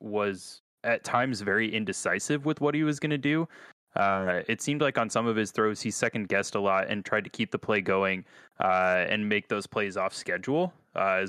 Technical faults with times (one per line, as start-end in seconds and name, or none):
0.50-10.84 clock slip clicks